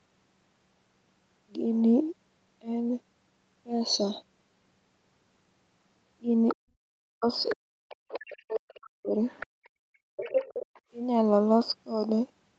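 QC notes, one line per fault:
6.48–6.55, 7.44–7.55, 7.89–8.76, 9.28–9.69 and 10.16–10.8 s: other side's voice leaking through. A second voice sits behind the main talker, roughly 10 to 25 dB down. It is likely loudspeaker echo the canceller failed to subtract. On a spectrogram it shows as faint, separate harmonic traces under the main speech.
6.53–9.16 s: speech suppressed in double talk. The main voice dips, by up to about 40 dB, for around two seconds in total, while the other side is also audible. This is likely the canceller mistaking the talker for echo and attenuating both. The waveform envelope shows the drop in level.
9.46–10.16 s and 10.72–10.84 s: background gated by the echo canceller. The room tone drops out hard, by about 36 dB for 0.7 s and then about 31 dB for a brief 70 ms, and returns once the canceller releases. Both gaps show as near-silent vertical bands in the spectrogram's noise floor, which elsewhere stops at 8 kHz.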